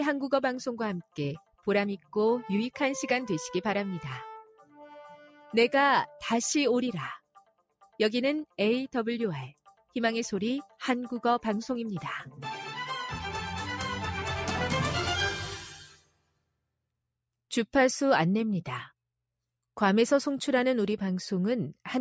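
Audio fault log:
Throughout: noise suppressor applied to music or sounds. A suppressor tuned for speech stays active and keeps judging sustained content as noise. It pulls the level of held and decaying material up and down by a few decibels, so the sound pumps and its tails feel thinned. Sharp onsets mostly get through. The call chain's normal band limit means nothing sits above 8 kHz.
1.41–16.52 s: sound cut by the noise suppressor, at seven points. The suppressor misclassified passages as noise and cut them harder than the rest, by about 16 dB at 1.41–1.67 s, about 10 dB at 1.99–2.15 s, about 12 dB at 4.46–4.8 s, about 7 dB at 5.27–5.53 s, about 18 dB at 7.19–7.99 s, about 15 dB at 9.54–9.95 s and about 19 dB at 15.81–16.52 s. Each dip lasts a fraction of a second, and the longest is under a second near 16 s. The level sags or the decay is chopped short, then recovers.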